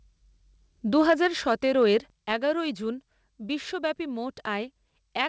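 From 0.96 to 1.53 s the loudest parts of the speech get a gritty, crackly edge: microphone overload, with peaks pushed about 4 dB past the converter's ceiling so their tops are flattened. Only a small fraction of the waveform is actually chopped, but it's enough to hear on the strongest syllables. The likely cause is an input gain set too hot. It comes back briefly from 2.31 to 2.33 s, only about 1 dB over, so it's a quick rough flick rather than a sustained crunch.

In between, you can hear the microphone volume stepped down twice. At 1.10 s, in the middle of that first distorted stretch, the level drops by about 2 dB. At 2.10 s there's a bigger step of about 6 dB, and the voice and background both sink at once. These sound like the call software likely reacting to the clipping by pulling the device input down in single jumps. The whole thing sits on a call-codec path with nothing above 8 kHz, which fits G.722 at 64 kbps.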